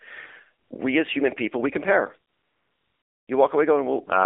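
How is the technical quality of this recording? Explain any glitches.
The technical quality is poor: the recording has passed through a narrowband mobile speech codec and has two comfort-noise patches.

AMR narrowband mobile codec (throughout): the speech sits between 300 Hz and 3.6 kHz, and the buzzy, synthetic coding damage fits a low AMR-NB mode of around 7.4 kbps. Each 20 ms frame is rebuilt from a vocal-tract model driven by sparse pulses. A spectrogram shows nothing above 3.6 kHz.

AMR comfort noise at 0.64 to 0.70 s (60 ms) and 2.32 to 3.28 s (960 ms, right after "human people we compare"): the phone treated these stretches as silence and sent no speech frames, so the receiver filled them with smooth synthetic noise. The waveform shows flat, even hiss that switches in and out.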